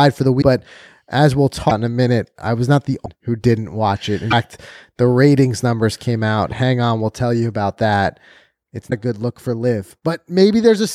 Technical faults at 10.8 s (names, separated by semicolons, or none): none